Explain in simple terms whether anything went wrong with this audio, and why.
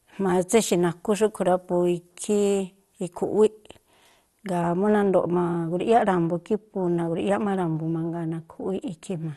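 From the start to 4.61 s, the speech sounds thin, bright and hissy. That is pre-emphasis left on: the treble was boosted, and the matching cut never came.

Throughout, the sound is dull and gurgly, with nothing above about 12 kHz. This is likely MP2 compression with too few bits, so upper treble is dropped.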